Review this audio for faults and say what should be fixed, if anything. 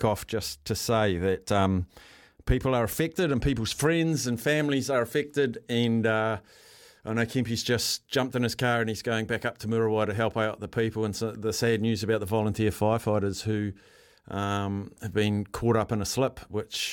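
Nothing needs fixing here, as no technical faults turn up anywhere in this speech recording.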